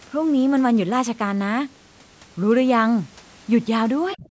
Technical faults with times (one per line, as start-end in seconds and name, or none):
4.15-4.27 speech suppressed in double talk